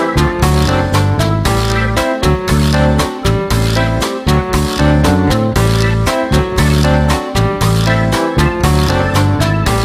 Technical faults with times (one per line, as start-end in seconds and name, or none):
none